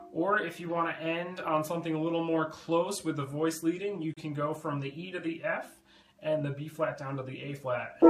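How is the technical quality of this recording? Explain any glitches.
There is one glitch: a short silent dropout just past the four-second mark.

A gap between stream segments occurs at 4.14 to 4.17 s. The timestamps of two consecutive segments leave a hole of about 30 ms, which the player fills with silence. It sounds like a hard-edged cut, and the placement fits 4-second segments. No audio is lost.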